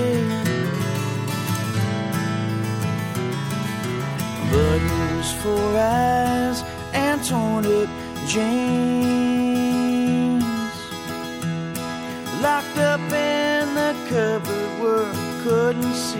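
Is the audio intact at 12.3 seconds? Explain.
Yes, the audio is intact at 12.3 seconds, with no dropout, click, distortion or other fault at that point.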